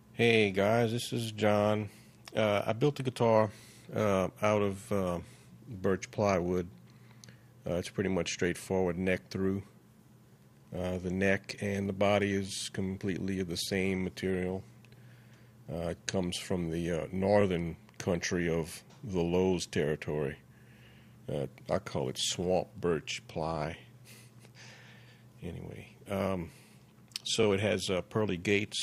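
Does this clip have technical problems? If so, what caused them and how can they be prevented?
Yes. The audio was handled in 10-second chunks, and each chunk began 20 ms before the previous one ended, so that 20 ms slice plays twice at every join. This is the overlapping chunks fault. It produces a brief click or stutter at 7.39–7.41 s, 17.41 s and 27.43–27.45 s, evenly spaced 10 seconds apart. To prevent it, make each chunk start exactly where the last one stopped, or trim or crossfade the shared region when the chunks are joined.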